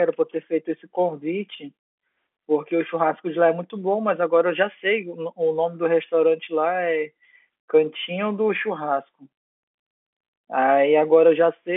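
No technical faults can be heard anywhere in this speech recording. It carries the narrow sound of G.711 telephone coding, with the line band running from about 250 Hz to 3.4 kHz and nothing above 3.8 kHz.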